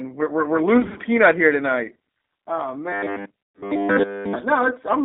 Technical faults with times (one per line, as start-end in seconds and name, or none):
0.00-5.05 G.729 codec
0.78-0.99 VoIP packet loss concealed by the speech codec
2.92-4.35 robotic sound from repeated short buffers
3.45-3.63 VoIP packet loss concealed by the speech codec